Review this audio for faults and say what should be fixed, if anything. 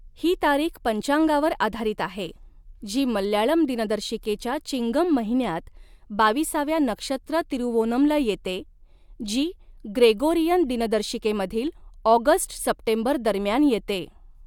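Nothing here needs fixing; no faults are audible.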